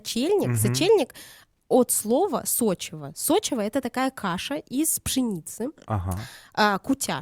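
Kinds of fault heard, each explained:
No technical faults can be heard anywhere in this speech recording. There is nothing to list under any kind of fault.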